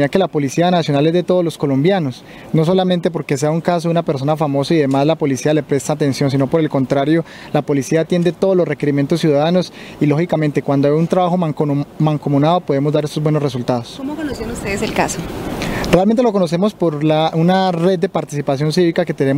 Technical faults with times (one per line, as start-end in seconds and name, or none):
none